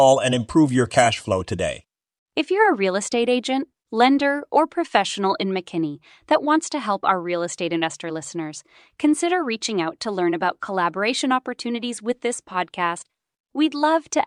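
A speech recording with no audible technical faults.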